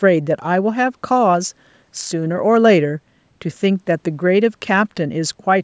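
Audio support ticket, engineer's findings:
No faults found in speech.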